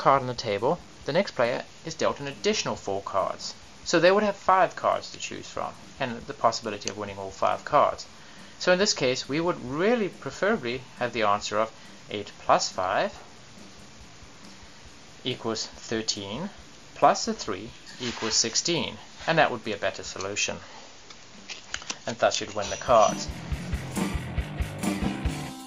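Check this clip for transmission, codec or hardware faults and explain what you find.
DAB burbling occurs three times: 4.72–4.81 s, 6.55–6.77 s and 23.22–23.25 s. Residual bit errors corrupt MP2 sub-band samples and scale factors, producing brief noise blips and sub-band level jumps over the sound.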